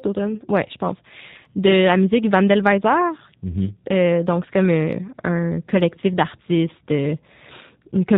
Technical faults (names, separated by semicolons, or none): G.729 codec